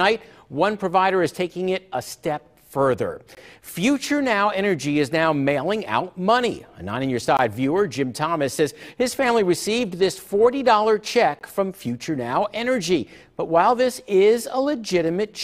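At 3.35 to 3.37 s, 7.37 to 7.39 s and 11.39 to 11.41 s, the sound drops out for 20 ms each time, a gap between chunks. The holes recur every 4.0 s, marking the joins where the audio was split into chunks and silence was inserted between them. Nothing is missing from the signal; it is interrupted. Each gap is heard as a brief hole in the sound, at a steady rhythm.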